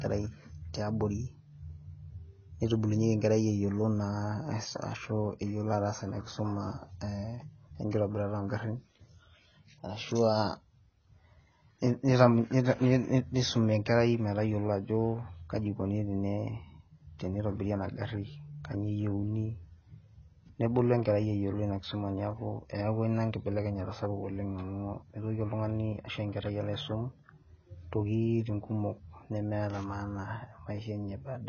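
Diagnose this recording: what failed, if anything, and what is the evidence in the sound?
Codec stage. The speech is band-limited throughout, with nothing above 6.5 kHz, so it sounds dull and smeared, and sibilants take on a fizzy, warbling texture. This is likely heavy AAC compression, with the pattern pointing to AAC-LC at around 16 kbps. At that rate the encoder pulls its cut-off down and starves the remaining bands of bits, quantising them so coarsely against its hearing model that detail collapses into smeared, noisy texture.

The pre-echo at 7.90 to 7.93 s is the same codec's doing: a brief hiss, about 24 ms long, runs just ahead of a sharp onset, and the attack itself lands soft rather than crisp. The transform spreads quantisation noise evenly across its whole block. Because the attack sits late in that block, noise scaled for the loud transient also covers the quiet stretch before it, where nothing masks it.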